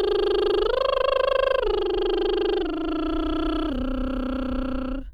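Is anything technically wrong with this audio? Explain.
No, nothing in this music stood out as technically wrong on listening.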